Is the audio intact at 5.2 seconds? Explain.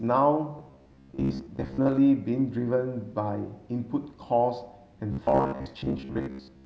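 No. At 5.2 seconds the speech has turned into a rigid, metallic buzz pitched at about 67 Hz, with the words still roughly traceable underneath. This robotic sound from repeated short buffers runs from 5.12 s to 6.65 s. The likely cause is audio arriving too late: playback fills the gaps by looping the last fragment, about 15 ms long, while most of the real signal is dropped. That fixed loop length stamps its own pitch onto the sound.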